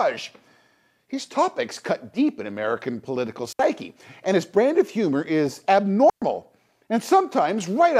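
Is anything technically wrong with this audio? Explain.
Yes. Two digital wireless dropouts occur in this speech: at 3.53–3.59 s (about 67 ms) and at 6.10–6.22 s (about 121 ms), just after "brand of humor is". The receiver lost too much data and briefly muted, leaving clean near-silent holes. Unlike an analog radio dropout, there is no hiss or crackle around either gap.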